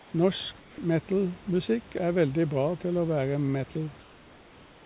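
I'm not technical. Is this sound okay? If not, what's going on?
No. Comfort noise in place of the background appears at 0.00 to 0.14 s, at 0.60 to 0.78 s just before "metalmusikk er veldig", and from 4.00 s, after "til å være", to the end. In those gaps the room's real hiss gives way to a smoother, flatter, slightly quieter hiss. The likely cause is the call system pausing transmission when nobody talks, while the receiving end fills the silence with artificial noise.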